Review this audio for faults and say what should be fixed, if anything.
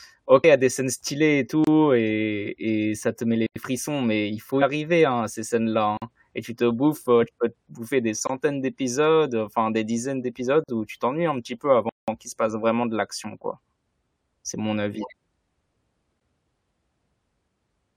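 Two brief glitches, at 0.43 s and at 4.61 s (between "frissons mais il faut" and "arriver hein à ces"), each under 20 ms, come from damaged data in a compressed stream. Corrupted or missing bytes make the decoder misread those frames and lose sync until it finds the next valid frame header, which produces the blip. Fixing this means protecting the file or stream in transit and storage, with checksums and retransmission, so that frames arrive intact.

The sound drops out seven times, from blocks of digital silence at 1.64 s (28 ms), 3.46 s (93 ms), 5.97 s (46 ms), 8.27 s (22 ms, after "peux te bouffer des"), 10.64 s (46 ms, before "où tu t'ennuies un"), 11.89 s (186 ms) and 16.20 s (12 ms). Samples were likely replaced with zeros when the output buffer went unfilled, and the longer gaps match 2048, 4096 and 8192-sample buffers. Larger buffers or higher processing priority would keep the buffer filled.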